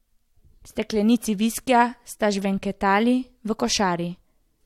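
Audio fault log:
No faults heard anywhere in this speech recording.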